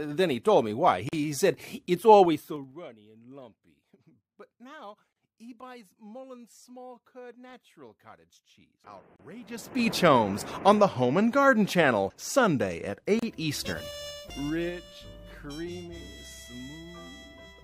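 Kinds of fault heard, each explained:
Gap at a join of encoded pieces: Separately encoded pieces were joined untrimmed. Silences of 32 to 42 ms open every 4 s, at 1.09, 5.13, 9.16 and 13.19 s.
Zipper noise: Level moves in unsmoothed 3 dB steps, about fifteen per second. Ticking rides a drop of about 20 dB at 2.22 to 2.77 s, and a matching rise at 9.39 to 9.92 s.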